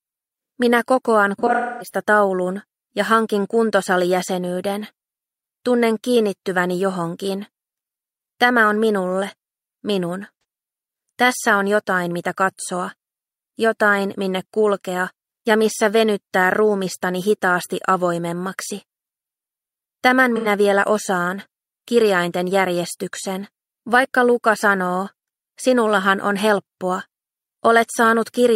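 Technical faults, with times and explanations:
1.38 to 1.99 s: AAC frame loss with concealment. Several lost frames, about 340 ms in all, scattered across roughly 430 ms, with the longest gap about 300 ms. The decoder repeats the last good spectrum, so the sound turns smeared and noisy, then fades before recovering.
10.35 s to 10.43 s: AAC frame loss with concealment. About 85 ms missing, which fits two lost frames. Brief phasey smear.
20.36 s to 20.47 s: AAC frame loss with concealment. Same short 85 ms smear.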